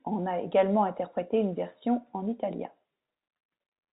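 No technical faults can be heard in this speech recording.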